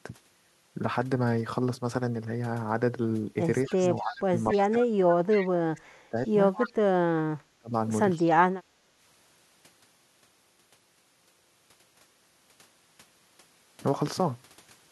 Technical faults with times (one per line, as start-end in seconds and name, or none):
3.66-4.14 echo leak
3.69-6.17 speech suppressed in double talk
4.51-4.58 echo leak
5.32-5.49 echo leak
6.26-6.70 echo leak
7.08-7.73 speech suppressed in double talk
8.17-8.23 echo leak
8.72-8.85 background gated by the echo canceller